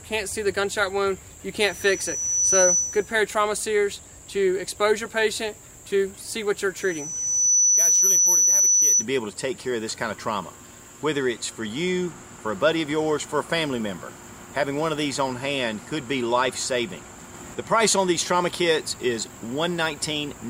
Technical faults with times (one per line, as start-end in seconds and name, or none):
1.61-3.14 loudspeaker feedback squeal
6.76-9.06 loudspeaker feedback squeal